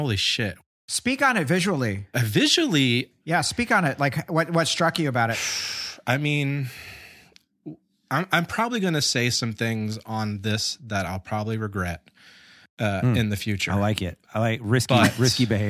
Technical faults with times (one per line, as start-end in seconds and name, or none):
none